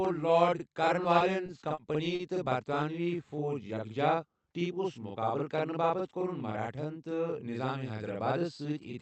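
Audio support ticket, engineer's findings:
Channel delay (doubling), whole clip: one channel trails the other by about 46 ms, which fits a 2048-sample buffer. Summed to mono, the late copy lands as a same-level slap echo behind every syllable, heard over a call-codec band that tops out near 8 kHz.

Repeated stalls (stutter), 1.03–1.79 s, right after "لارڈ کارن": the jitter buffer ran dry four times. The receiver held the last sound each time, about 80 ms in total with the longest hold about 30 ms. Nothing is lost, but about 11% of the span is stretched fill, so the speech drags and stutters.

Short stall from a late packet, 2.15–2.21 s: a packet arrived late and the buffer emptied. About 40 ms of the preceding sound is held, then playback resumes from the same point. Latency rises by about 40 ms.

Jitter buffer slow-down, 3.02–3.93 s: the buffer was rebuilding its reserve by repeating pitch periods and pause fragments, adding about 75 ms. 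Speech runs at 93% speed with unchanged pitch. Sounds are drawn out.

Jitter buffer speed-up, 5.90–6.75 s: the buffer was over target and trimmed short pitch-period pieces in succession, roughly 70 ms in total. Speech plays at 107% speed at the same pitch and sounds hurried.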